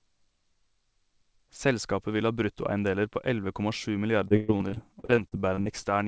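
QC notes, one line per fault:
4.28 to 5.85 s, repeated packet loss (robotic sound): choppy speech broken by sixteen short dropouts, the longest about 121 ms. Lost or late packets are patched by stretching the preceding sound, so about 30% of this span is filled-in rather than real audio.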